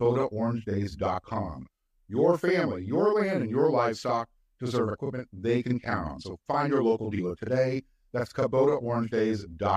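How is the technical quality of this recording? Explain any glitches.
The recording has one clear problem running through the whole speech clip: a channel delay that causes doubling. One channel is arriving about 40 ms late, and when the two sides get folded to mono, that late copy sits right behind the original at the same level. At 40 ms it's too far apart to blend, so every syllable sounds doubled, almost like a quick slap echo off a nearby wall. You hear it from start to finish.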